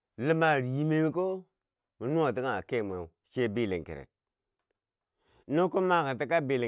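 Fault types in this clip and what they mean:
No technical fault can be heard anywhere in this speech recording. There is nothing to list under any fault type.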